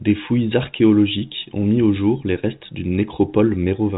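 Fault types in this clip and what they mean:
No faults can be heard.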